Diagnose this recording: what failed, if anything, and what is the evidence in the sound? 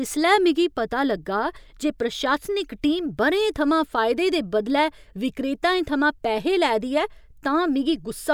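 Nothing in the recording stood out as a fault on listening.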